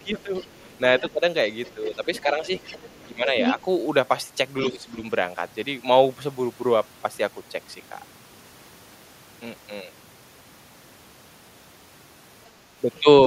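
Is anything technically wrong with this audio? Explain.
Yes. Speech suppressed in double talk occurs at 0.0 to 1.2, 1.74 to 2.5, 3.06 to 3.59 and 4.64 to 4.98 s. The speech dips by up to roughly 15 dB. The likely cause is an echo canceller ducking both voices during overlap.

The other side's voice leaks through at 0.35 to 1.12, 1.65 to 3.61 and 12.95 to 13.0 s. It is faint at first, nearly as loud as the speech around 2 s, and brief at the end. The likely cause is loudspeaker echo the canceller missed.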